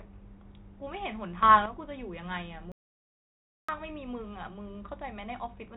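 From 1.43 to 1.66 s there is a sudden gain jump, likely a gain setting applied without any ramp. The level rises by about 10 dB from one sample to the next, lifting the speech and background noise together, then drops back after roughly a quarter second.

From 2.72 to 3.69 s comes an audio dropout to silence, likely a lost input while the recorder kept writing silence. For 0.97 s the speech cuts out into dead digital silence with no room tone, then resumes mid-flow. The telephone-band sound stops at 3.9 kHz, consistent with 32 kbit/s G.726 coding.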